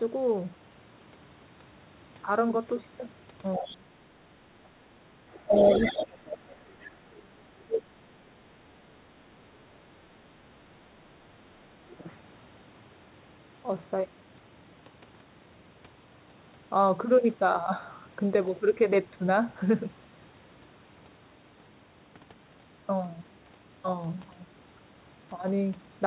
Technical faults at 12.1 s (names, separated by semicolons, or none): channel delay (comb filtering); other side's voice leaking through